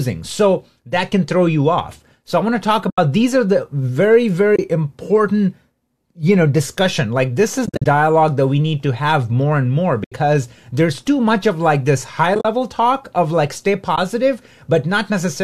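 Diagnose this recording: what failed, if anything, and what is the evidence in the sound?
Packets were lost on the network path, and the decoder likely muted the missing low-delay AAC frames. This AAC frame loss with muting leaves soft-edged holes at 2.90–2.98, 4.56–4.59, 7.66–7.86 (broken up), 10.04–10.12, 12.35–12.45 and 13.96–13.98 s.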